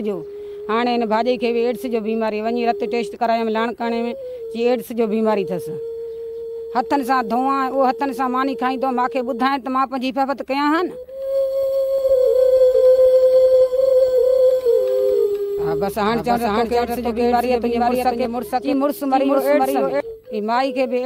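From 11.98 s to 20.00 s a doubled audio track appears: a second, full-band copy of the sound runs about half a second behind the original at roughly the same level. It switches on and off abruptly, and the lagging copy carries no decay or room colour. That sets it apart from an echo or reverb tail, which would fade and take on the space's character. The likely cause is a second, slower capture path mixed in with the first.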